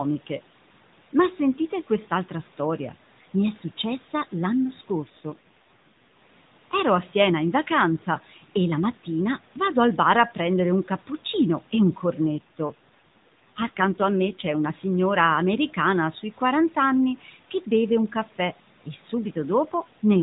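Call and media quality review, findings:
AMR rate drop: speech turns rougher and more synthetic at 5.02–6.22 s, after "è successa l'anno", and at 12.27–14.71 s, from "un cappuccino e un" to "signora americana sui". The bandwidth stays the same and there's no dropout. The network stepped the AMR-NB codec down from 12.2 to 5.9 kbps, probably because of a weak radio link, leaving fewer bits to model the voice until the rate recovered.

Speech cut by the noise suppressor: a brief swallowed, faint patch at 17.21–17.35 s, right before "che beve un caffè", about 150 ms in total and about 9 dB down at its deepest. The noise suppressor classified quiet speech energy as background and attenuated it along with the room noise.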